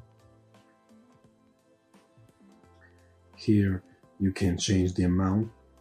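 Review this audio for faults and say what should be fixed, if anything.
Nothing in the signal needs fixing; no technical fault can be heard anywhere in the recording.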